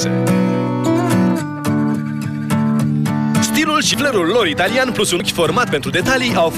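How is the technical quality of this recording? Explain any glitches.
The recording has two glitches. At 3.94 s and 5.2 s the sound jumps abruptly, skipping ahead by about 70 ms each time. This is likely a dropped buffer (overrun): samples were overwritten before being read. Unlike a dropout, no silent gap appears.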